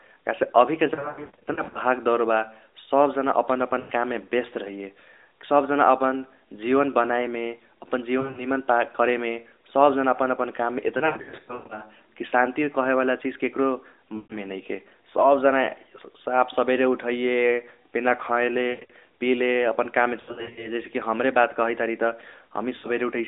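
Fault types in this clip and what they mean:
lost AMR speech frames: radio errors corrupt 20 ms frames, so the AMR narrowband decoder repeats the last good pitch and vocal-tract settings at falling gain. This clip has eight bursts between 0.94 s and 22.87 s. The worst, at 0.94 to 1.79 s and 10.98 to 11.82 s, scatter runs of up to 140 ms across 800 ms. In these bursts the speech is smeared and warbling, fades, and comes back rough.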